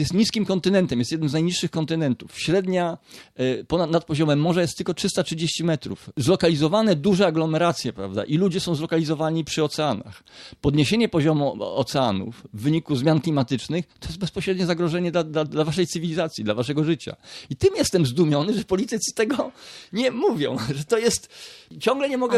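No technical faults can be heard anywhere in the audio. There is no moment that needs a timestamp and no audible problem to trace to a cause.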